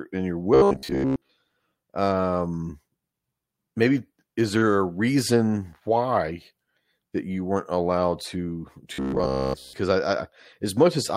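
From 0.54 to 1.31 s, just after "and you're", the speech turns into a robotic sound from repeated short buffers. It returns from 8.94 to 9.73 s, after "you weren't allowed to". Both times a rigid, metallic buzz near 66.7 Hz sits on the speech. It still follows the words loosely. The likely cause is audio arriving too seldom, so a 15 ms slice is looped to fill the gap. Most of the real audio is skipped.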